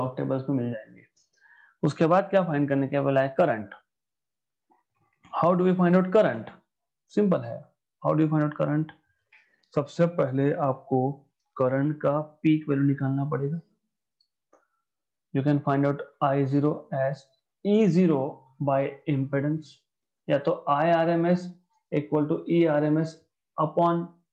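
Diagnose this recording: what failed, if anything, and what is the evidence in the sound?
Drift correction step, at the driver or buffer stage. From 2.92 to 3.62 s, speed rises 6% and pitch a semitone. From 9.44 to 11.85 s, both drop: 6% and 106 cents. Each snaps back. Clock-matching software likely stepped its rate to balance the buffer.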